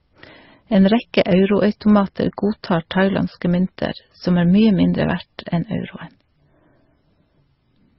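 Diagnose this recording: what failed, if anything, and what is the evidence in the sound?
The codec stage is where this went wrong, and it runs through the whole clip. The speech has nothing above about 5.7 kHz, and the artefacts sound layered: smeared, swirly low-bitrate MP3 texture sitting under a second coder's own graininess. That points to likely transcoding between lossy codecs, roughly an 18.8 kbit/s MP3 re-encoded to Opus at 32 kbit/s. Opus wasted bits faithfully preserving MP3's damage, added its own, and the MP3's low cut-off stuck.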